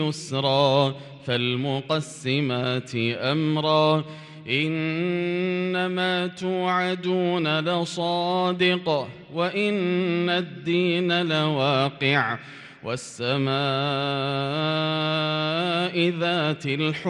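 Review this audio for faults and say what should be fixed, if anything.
Nothing here needs fixing, since there are no faults to point to and the audio can be left as it is.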